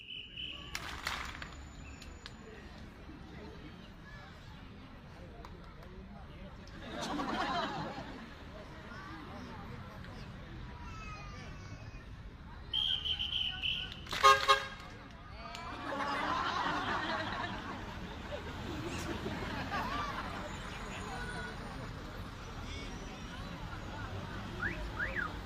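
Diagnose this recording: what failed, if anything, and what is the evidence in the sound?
Nothing failed, and the sound gives no evidence of a fault at any stage.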